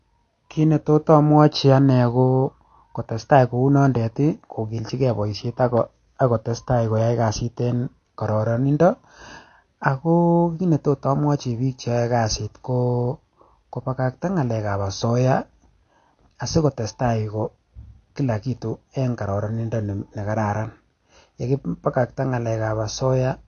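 Speech runs through the whole clip with AAC compression damage that is plainly audible from start to finish. Nothing is heard above 6.5 kHz, so the sound is dull and the sibilants lose their edge. Sustained sounds carry a warbling, smeared texture. The likely cause is AAC-LC encoding at a low bitrate, which fits roughly 32 kbps. The encoder dropped the top of the spectrum and coarsely quantised what remained.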